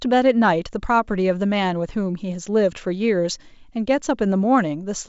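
No technical faults can be heard in this speech. It has the sound of G.722 wideband telephone coding, with nothing above about 7.7 kHz and at most a faint trace of coding hiss, which fits the full 64 kbit/s mode.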